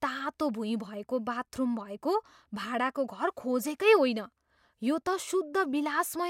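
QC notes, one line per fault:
No faults heard on this speech clip.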